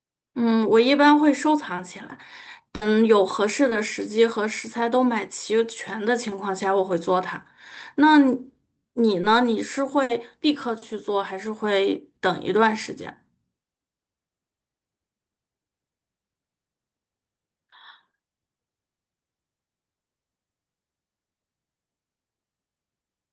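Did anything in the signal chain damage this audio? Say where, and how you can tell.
Yes. The damage happened at the network stage of the call. At 2.75 to 2.83 s and again at 10.03 to 10.11 s there is a burst of packet loss. About 60 ms of audio did not arrive in time. The receiver extended the last sound and faded it down, so it turns into a held buzz or dying hiss. Speech then picks up further along with that stretch gone. The length gives it away: this is far longer than a single concealed packet, and the gap has an audible fade.

Short concealed packet loss appears at 3.69 s and 9.21 s. Each is a single lost piece of about 20 ms, again a network fault patched by the decoder's concealment. Here the fill is too brief to decay into a buzz, so it comes across as a quick smear or wobble, and a short consonant may drop out. That brevity, and the absence of any held tone, is what separates it from the bursts. 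Both faults sit on top of the Opus call path, whose top end stops near 8 kHz.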